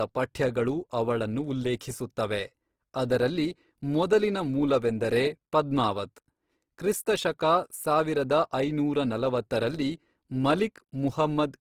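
Speech throughout keeps the artefacts of heavy compression despite a cut-off at 20.2 kHz, likely low-bitrate audio saved at a high bitrate, consistent with 16 kbit/s Opus re-encoded as 320 kbit/s MP3.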